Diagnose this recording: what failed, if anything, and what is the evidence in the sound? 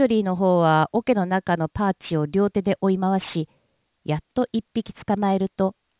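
Aliasing throughout, from sample-rate conversion. Sibilants turn gritty and metallic. Resampling to 8 kHz unfiltered folded content above 4 kHz back, roughly 25 dB down.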